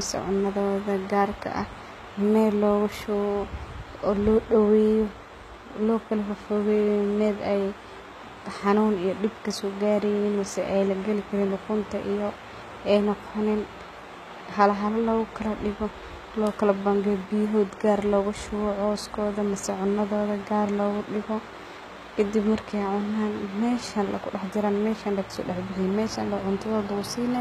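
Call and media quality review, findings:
Throughout the speech: s sounds gritty and lispy, treble extended but metallic, plainly audible coding damage, nothing above 14.9 kHz. Likely HE-AAC compression at a low rate, fitting roughly 20 kbps. Upper band is rebuilt by copying lower bands upward under a coarse envelope, so its harmonics misalign with the coded lows.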